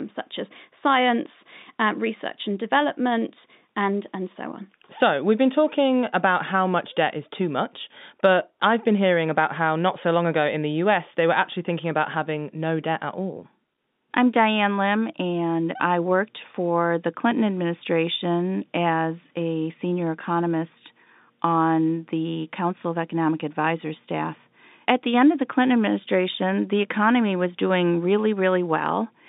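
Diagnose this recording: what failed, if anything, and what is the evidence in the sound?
Nothing failed; it sounds like an ordinary telephone line.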